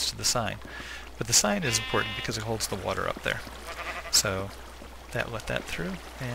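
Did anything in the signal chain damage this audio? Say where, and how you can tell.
No, nothing in the chain audibly damaged it.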